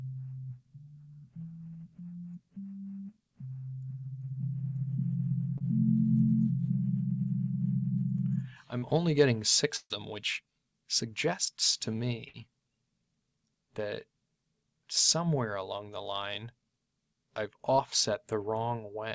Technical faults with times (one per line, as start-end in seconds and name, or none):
5.58-5.62 short concealed packet loss
8.78-8.84 short concealed packet loss
9.76-9.92 burst of packet loss
12.28-12.36 burst of packet loss